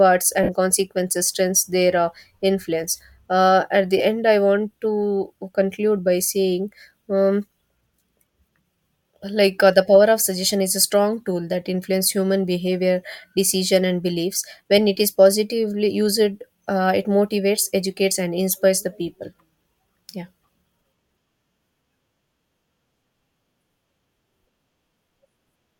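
Around 0.43 to 0.49 s, and again briefly at 3.98 s, there are lost LE Audio frames: the decoder patches each 52 ms and 15 ms gap by reusing the last spectrum with scrambled phase, so the speech smears into a short noisy blur.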